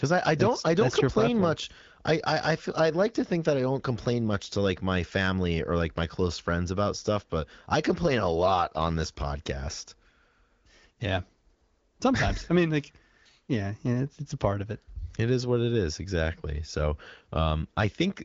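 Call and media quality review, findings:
Nothing stood out on listening to this speech, which was carried over the AMR wideband (HD Voice) codec at 15.85 kbit/s.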